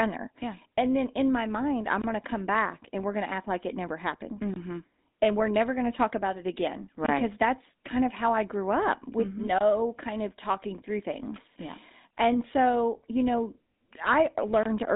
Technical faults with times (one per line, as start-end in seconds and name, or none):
0.00-14.95 GSM full-rate codec